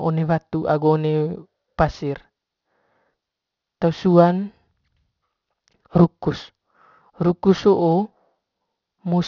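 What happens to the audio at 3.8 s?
At 3.8 s the speech carries aliasing, present across the whole clip rather than starting there. The audio was resampled downward without first removing content above the new Nyquist limit, which fits a drop to a 12 kHz rate. Energy above 6 kHz folds back below that edge onto unrelated frequencies, sitting roughly 30 dB under the speech. Sibilants come out gritty and metallic, and the spectrum runs hard up to 6 kHz.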